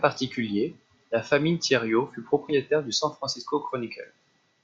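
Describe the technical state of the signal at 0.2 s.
At 0.2 s the speech signal is intact, with no audible fault at that moment.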